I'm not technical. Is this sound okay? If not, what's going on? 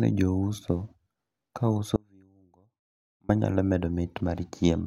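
No. Audio dropout to a faint residue: the signal was likely lost on a still-open line, so from 1.96 to 3.29 s the speech abruptly shrinks to a faint trace.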